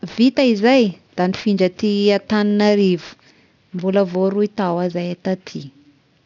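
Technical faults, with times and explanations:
Throughout, aliasing: content above 6 kHz folds back into wrong frequencies, making sibilants gritty and metallic, well below the signal; unlike plain low-pass dulling, the spectrum stays full right up to the 6 kHz edge, which fits a drop to a 12 kHz rate without filtering.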